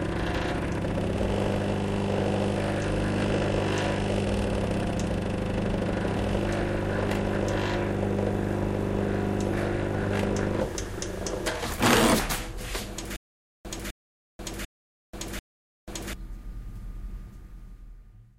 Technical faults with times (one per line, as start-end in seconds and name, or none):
13.16-16.13 stutter with silent gaps